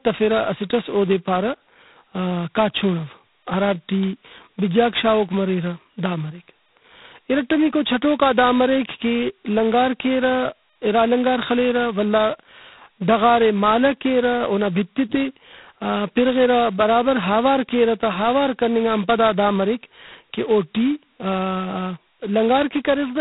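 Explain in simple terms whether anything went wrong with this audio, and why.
G.726 ADPCM damage runs through the whole recording, from the first second to the last. This kind of phone coding doesn't store the sound itself. It stores small differences between each moment and a guess based on what came before, using very few bits for each. Here the coding is heavy, so the speech carries a harsh, rasping hiss that rises and falls with its loudness. Everything above about 3.9 kHz is gone, which makes it sound thin and muffled.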